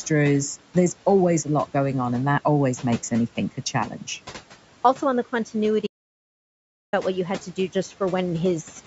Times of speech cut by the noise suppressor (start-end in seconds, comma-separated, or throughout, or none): 3.90-4.08